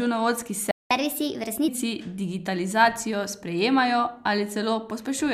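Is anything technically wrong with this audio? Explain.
Yes. The speech has two linked faults near the start.

From 0.71 to 0.91 s there is a playback stall. The speech cuts out in mid-flow for about 0.19 s. It then resumes. The likely cause is the player running short of buffered data, or its playback thread being blocked. Until it recovered, it had nothing to send to the output.

From 0.91 to 1.68 s comes catch-up at higher speed. The player resamples its backlog to run 1.25 times faster. This wins back the time lost in the gap. Because the speed-up is done by resampling, pitch rises with it, by roughly four semitones. The speech sounds hurried and audibly higher. At 1.68 s it drops back to normal speed and pitch.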